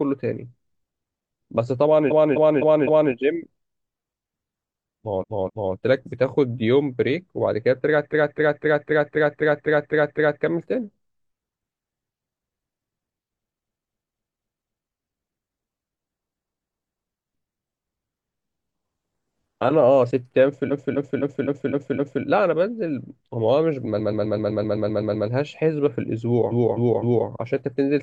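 Repeated frames stutter the speech at 2.07 to 3.09 s (256 ms block, four extra plays), 5.18 to 5.70 s (two), 8.09 to 10.39 s (nine), 13.59 to 14.87 s (five), 16.24 to 17.00 s (three), 20.67 to 22.21 s (six), 23.96 to 25.24 s (a shorter 128 ms block, ten), and 26.48 to 27.24 s (three). A run of compressed frames was played again, adding time. On a spectrogram and waveform, identical blocks tile side by side.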